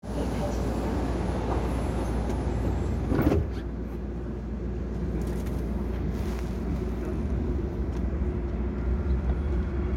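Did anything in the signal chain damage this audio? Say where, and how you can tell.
No, nothing in the signal chain damaged this audio.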